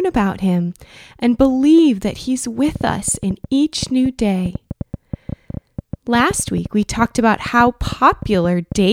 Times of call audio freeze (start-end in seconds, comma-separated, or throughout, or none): none